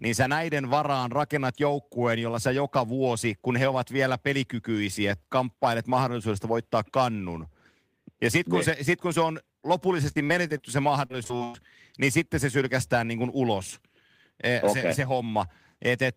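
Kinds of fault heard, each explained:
sample clock jitter: The converter's sampling clock wanders by roughly a couple of microseconds, so samples land slightly off time, and the error grows with waveform slope. It adds a faint hiss or roughness, around 35 dB below the speech, strongest on loud, bright sounds and gone in pauses.
repeated packet loss (robotic sound): Audio packets went missing again and again in two bursts, each gap patched by stretching the last sound. From 10.11 to 10.61 s and 11.05 to 11.56 s, just before "niin sitten se sylkästään", the speech turns choppy, with gaps up to 100 ms.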